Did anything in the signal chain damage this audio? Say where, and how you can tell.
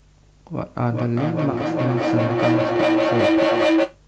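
Yes. A feedback howl takes over from 0.77 s to 4.03 s. The damage arises in the call path, through an acoustic loop between two devices sharing a room. A tone near 300 Hz rises out of the speech and peaks about 5 dB above it. It pulses roughly every 0.4 s, which is the loop's round-trip delay. Each pass adds gain, so the repeats grow rather than decay and narrow onto the frequency the loop favours.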